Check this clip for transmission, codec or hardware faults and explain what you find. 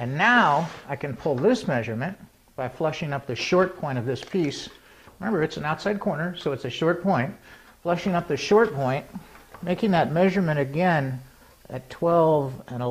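No transmission, codec or hardware faults can be heard anywhere in the recording, and the signal stays continuous and stable throughout.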